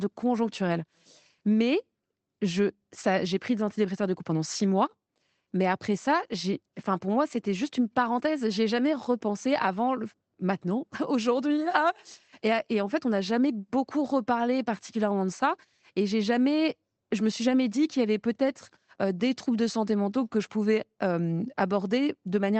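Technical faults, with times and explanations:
Nothing stood out on listening to this speech, which comes through a call connection with its band limited to roughly 8 kHz.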